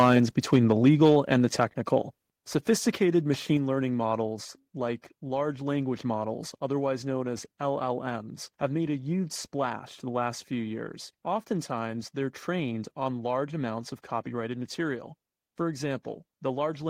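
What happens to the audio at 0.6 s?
The microphone's input level was likely set too high, so from 0.53 s to 1.36 s the speech peaks drive the converter past its limit by about 4 dB. The tops of the loudest waveforms are sheared flat, though only around one percent of samples are affected. That microphone overload gives the loudest syllables around 0.6 s a harsh, crackling edge rather than a clean peak.

At 0.56 s, just as the distortion begins, the software likely reacted to the overload by lowering the device's input volume in a single step of about 2 dB. This microphone volume stepped down event makes the speech and its background drop together abruptly, a small but sudden change in level, while the clipped peaks continue through to 1.36 s.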